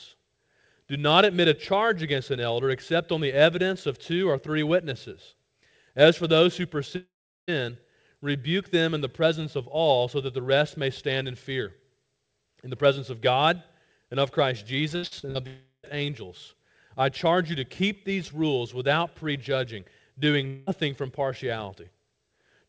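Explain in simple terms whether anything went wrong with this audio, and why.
Yes, something went wrong. From 6.96 to 7.51 s, 15.47 to 15.86 s, and 20.47 to 20.70 s, the sound stretches into a fading buzz. In the first two it falls quiet before resuming with a piece missing. This is a long network dropout, most likely audio that never arrived during a call.

From 14.96 to 15.38 s the sound turns choppy and robotic, with four short holes, the longest about 70 ms, covering nearly half that stretch. This is repeated packet loss: small chunks kept going missing and were patched by continuing the last sound.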